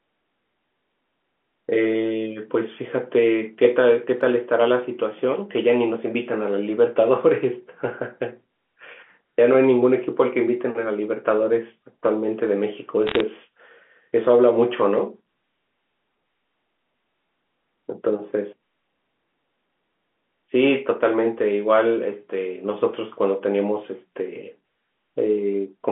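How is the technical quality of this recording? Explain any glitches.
The recording has one audible glitch, heard through a telephone-band line running from 200 Hz to 3.4 kHz.

From 13.07 to 13.20 s, bit errors on the digital phone line flip single samples, at a rate of a little under one percent, producing sharp ticks. The speech beneath stays intact, unlike packet loss, which leaves gaps.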